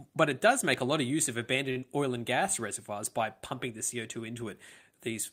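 A short stall from a late packet runs from 1.71 to 1.78 s, after "lot of use of": the jitter buffer emptied, so the last sound is held for 47 ms before resuming. A short concealed packet loss follows at 1.80 to 1.84 s, before "oil and gas reservoirs": 20 ms never arrived and was filled by extending the preceding sound, leaving a brief smear.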